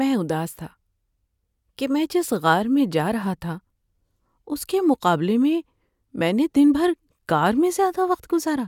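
No technical faults are audible.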